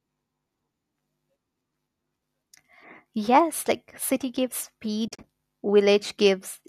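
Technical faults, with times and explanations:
5.08 to 5.24 s, AAC frame loss with muting: just after "like city gives", the sound drops out in several short soft-edged gaps, about 90 ms missing in total, spread over 160 ms, the longest hole around 40 ms. The decoder zeroed the spectrum of the lost frames, and the overlapping windows fade each gap in and out rather than clicking. The light graininess of the likely low-delay AAC compression surrounds the gaps. The spectrogram shows blank vertical bands with tapered edges, and the waveform shows smoothly shrinking envelopes.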